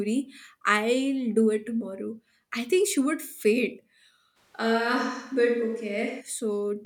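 At 4.38 s, right after "think she would faint", the speech turns roomy and hollow and stays that way until 6.20 s. This is a switch to a distant microphone, likely because the close microphone dropped out and a farther one took over. Bass thins and reverberant tails smear each syllable. On a spectrogram the low band weakens and energy blurs into gaps. The waveform holds about the same level, its noise floor roughly 40 dB down.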